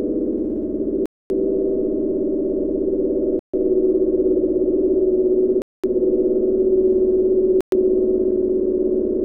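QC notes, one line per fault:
1.06–1.30 s, 3.39–3.54 s, 5.62–5.84 s and 7.61–7.72 s, Bluetooth stall: the sound drops abruptly to silence for 244, 142, 217 and 115 ms, then resumes where it left off. The likely cause is radio interference delaying packets until the headphone buffer emptied and playback waited for retransmissions. On a waveform each gap is a flat line with hard edges. On a spectrogram it is a clean vertical blank band across all frequencies.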